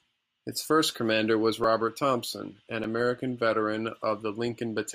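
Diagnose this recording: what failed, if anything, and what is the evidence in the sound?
Repeated buffer at the driver or buffer stage, at 1.64 s and 2.84 s: a roughly 2.9 ms chunk replays twice, fitting a 128-sample buffer, giving a click or brief buzz rather than a silent dropout.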